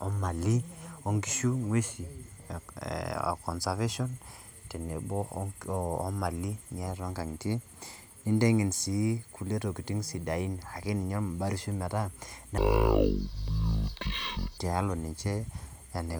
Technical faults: stereo read as mono

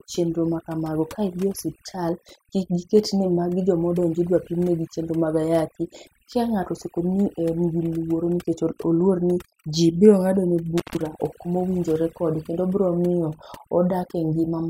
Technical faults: overdone noise removal; intermittent contact

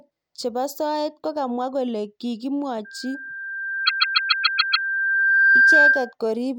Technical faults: loudspeaker feedback squeal; repeated frames

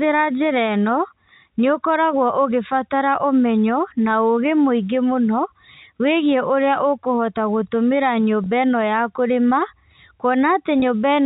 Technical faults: packet loss with pitch repetition

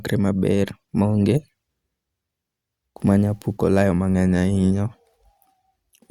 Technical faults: drift correction step

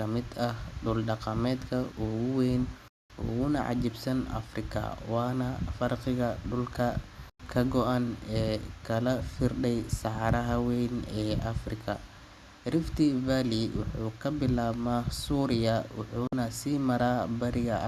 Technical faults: digital broadcast dropout

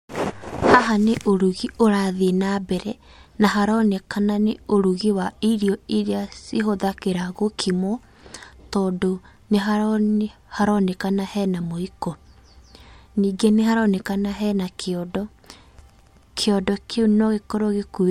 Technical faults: none

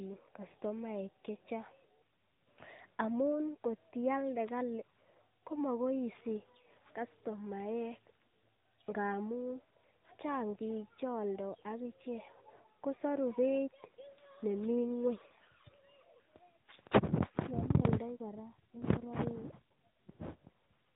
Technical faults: AMR narrowband mobile codec

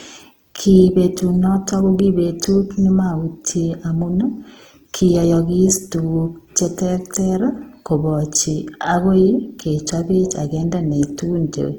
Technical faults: Opus compression

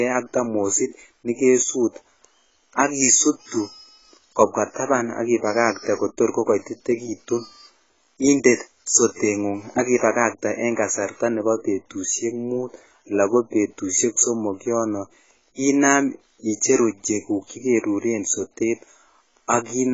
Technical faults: AAC compression

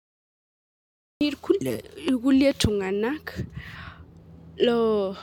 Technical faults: cut-off start

